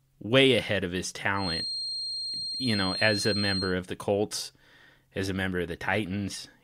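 From 1.33 s to 3.77 s a thin, steady whistle near 4.2 kHz sits behind the speech, only a few decibels below it and swelling and fading slowly in level without building up. It is a feedback whistle, likely caused by the loudspeaker-to-microphone loop running just at the edge of feedback, so that one high frequency keeps ringing around the loop at a low level instead of swelling into a full howl.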